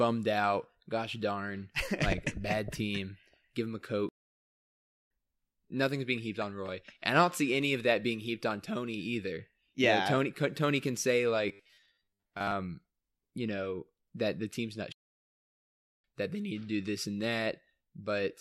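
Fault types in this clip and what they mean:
Playback stall: the speech drops to silence mid-flow twice, from 4.09 to 5.11 s (about a second) and from 14.92 to 16.04 s (about 1.1 s), then carries on. The player likely ran dry of data or had its thread blocked until it recovered.
Robotic sound from repeated short buffers: between 11.48 and 12.56 s the speech turns into a rigid metallic buzz pitched at 100 Hz, which fits a 10 ms chunk being looped, likely because fresh audio arrived too rarely, so most of the real audio there got skipped.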